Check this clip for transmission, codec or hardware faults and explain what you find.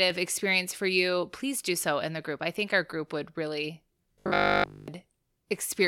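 One fault is present: robotic sound from repeated short buffers, from 4.14 to 4.88 s, right after "our group would really". For this stretch the speech becomes a rigid, metallic buzz at 50 Hz that only loosely tracks the original. The likely cause is audio arriving too seldom, so the software loops a 20 ms chunk, and nearly all of the real audio in that span is skipped. A spectrogram would show evenly spaced harmonics every 50 Hz with vertical striping every 20 ms, and the waveform would show the same 20 ms shape repeating.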